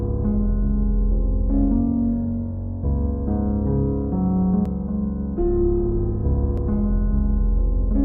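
At 4.66 to 4.69 s and again at 6.58 to 6.61 s, the audio breaks into a brief, roughly 30 ms glitch. This is damaged data in a compressed stream: corrupted bytes make the decoder misread those frames and lose sync until it finds the next valid frame header.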